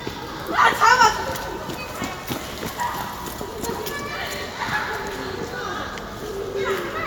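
Nothing stood out as a technical fault on listening to this recording of everyday sounds.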